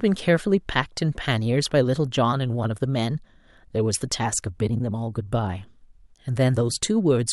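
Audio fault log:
No technical faults can be heard anywhere in the signal.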